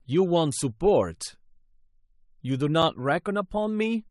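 A speech clip with one gap between stream segments at 2.82 s. The sound drops to silence for a few milliseconds, with hard edges on both sides. The hole is about 4.6 ms long. It comes from two stream segments whose time stamps don't meet. The player fills the space between them with silence. The segments appear to be 1.0 s long. Nothing is lost. The gap only adds a little time.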